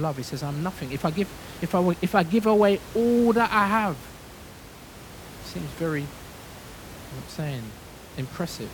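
No technical faults can be heard in the speech, and the room noise sitting about 18 dB below it belongs to the recording space rather than to any failure in the signal chain.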